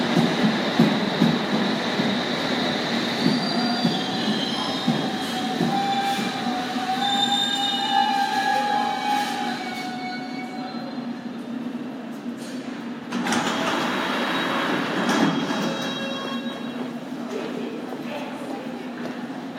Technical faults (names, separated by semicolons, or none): none